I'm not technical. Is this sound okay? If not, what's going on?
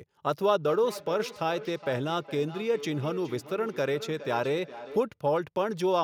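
No. From about 0.56 to 5.16 seconds there is feedback echo between two devices. Each bit of speech comes back roughly every four tenths of a second, sounding thinner and more ringing each time, though quieter than the original voice. This happens when two devices in the same room join one call. One plays the other's sound, that microphone picks it up again, and neither device's echo removal catches sound coming from the other.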